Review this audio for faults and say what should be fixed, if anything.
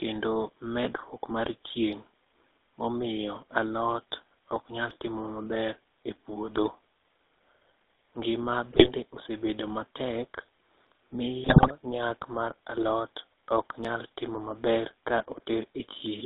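GSM full-rate codec, throughout: the whole recording has the gravelly, buzzy roughness of GSM full-rate coding, which fits its 13 kbps stream. The codec rebuilds speech from a vocal-tract filter driven by a thinned, regularly spaced pulse excitation, and the line band runs only from 300 Hz to 3.7 kHz, so everything above is gone. To prevent it, capture or route the audio over a wideband path instead of a GSM voice channel.

Audio missing between chunks, at 4.91 s, 10.87 s and 13.85 s: the sound jumps forward abruptly at each point, losing roughly 20 ms with no silence left at the joins. The spacing falls on multiples of 3 s, so the likely cause is a recorder or processor working in 3-second chunks that drops a sliver of audio each time it closes one chunk and opens the next. To prevent it, use overlapping or double-buffered chunk handling so that no samples are lost at the boundaries.

GSM bit errors, from 8.72 to 8.90 s and from 11.44 to 11.71 s: within these stretches the speech breaks into squawks, pops and gargling. 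Corrupted bits reached the decoder, so damaged filter, pitch and gain values distorted the spectrum and jolted the level frame by frame. To prevent it, improve the radio link or add error detection, so that damaged frames are concealed rather than decoded.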